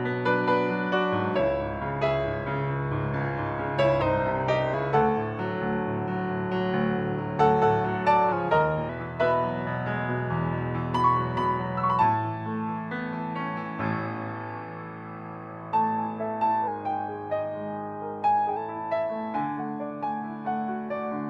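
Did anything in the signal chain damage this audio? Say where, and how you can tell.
Yes: a drift correction step appears three times, from 4.02 to 4.74 s, 8.32 to 8.89 s and 16.68 to 18.57 s. Each time the audio slows by about 5.9% and drops about a semitone (105 cents) at once, holds there, then snaps back to normal speed and pitch. The stage is likely the buffer and clock-matching layer, where resampling software abruptly changed its playback rate to rebalance a buffer between two mismatched clocks.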